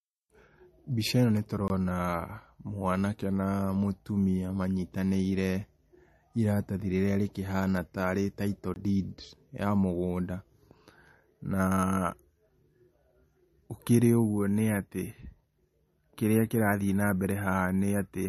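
Speech runs throughout with a watery, swirly coarseness, and on a spectrogram nothing reaches above 13 kHz, where a hard horizontal ceiling sits over flickering, patchy high bands. This is plainly audible codec damage, likely MP3 compression at a low bitrate of around 40 kbps. Two blocks of digital silence, each 20 ms long, fall at 1.68 to 1.70 s and 8.74 to 8.76 s. Each is heard as a short hole. The waveform drops abruptly to silence and jumps back with no fade.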